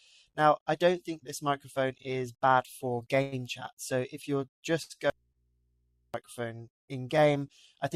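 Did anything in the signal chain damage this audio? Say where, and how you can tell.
Yes. Three kinds of damage come from the network and the input path, between about 3 and 6 seconds.

Short stalls from late packets at 2.95 s, from 4.83 to 4.93 s, and from 5.32 to 5.38 s. These are network-stage faults. At each one, the sound holds on its last moment instead of moving forward, for about 17 ms, 69 ms and 30 ms respectively, with a slight buzz or dip. The packet arrived late, the jitter buffer briefly ran dry, and the receiver stretched the last sound to cover the wait. Playback then resumed from the same point, so nothing is lost and the timing slips slightly later.

Call audio freeze from 3.22 to 3.35 s. This is also a network-stage fault. For about 102 ms the sound stops advancing and is replaced by a held continuation of the previous instant, a buzz or hiss that fades. The audio never goes fully silent. 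When the flow returns, it carries on from where it stalled. That pattern points to packets likely being held up in transit long enough to drain the jitter buffer, so a gap was inserted rather than anything removed.

Audio dropout to a faint residue from 5.10 to 6.14 s. The wanted signal cuts out abruptly for about a second, and only mains hum remains, sitting about 45 dB below the normal level. It then cuts back in just as sharply. This is not a natural pause or fade. The likely cause is a break at the source or in the analogue feed, with the downstream input left open and still live, which picks up hum while the signal is missing.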